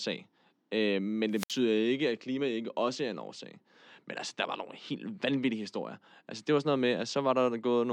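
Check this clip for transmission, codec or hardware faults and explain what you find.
One fault stands out, a wireless microphone squelch dropout between 1.32 and 1.59 s. The speech gives way to a short surge of hiss and static, then a hole of near silence lasting about 64 ms, before the speech comes back. This happens when the radio link from an analogue FM microphone weakens so far that the receiver's squelch gate judges the signal lost and mutes its output until reception recovers.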